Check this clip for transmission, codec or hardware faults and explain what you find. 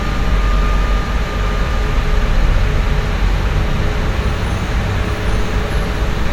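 One fault runs through the whole clip: a doubled audio track. Every event repeats about 0.7 seconds later at roughly equal loudness, a flat, full-band echo with no decay or room colour. The likely cause is the same signal being mixed in twice, once through a slower path that trails the original by a fixed delay.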